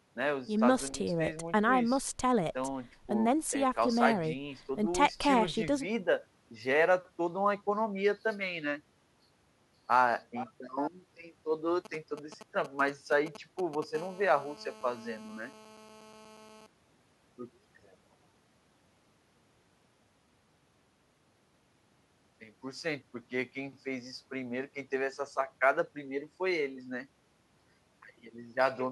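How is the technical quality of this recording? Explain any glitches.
The recording is marred by mobile-phone interference in the middle of the speech, in two back-to-back stages.

From 11.85 to 13.84 s there are GSM signalling bursts: a galloping dit-dit-dit of brief buzzes, sitting roughly ten decibels under the speech. A nearby 2G handset is exchanging short control transmissions with the network, and some stage of the audio circuitry rectifies those radio pulses, turning each group into a short snatch of 217 Hz buzz.

From 13.95 to 16.67 s the pattern settles into a GSM phone buzz, a continuous hard, raspy tone at 217 Hz with a dense stack of harmonics, about 20 dB below the speech. The steady character fits the handset now being in a call and transmitting its time slots 217 times per second without gaps. The rectified burst envelope becomes a constant buzz that bears no relation to the speech underneath it.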